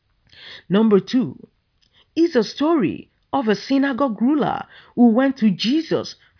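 No technical faults can be heard anywhere in the speech, so there is nothing to describe in time order.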